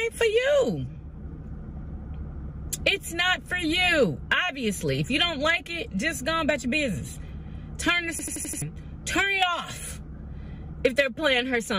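At 8.19 s a system hang loop repeats one 85 ms fragment five times until 8.62 s, a stutter at about 11.7 Hz, fitting a 4096-sample buffer.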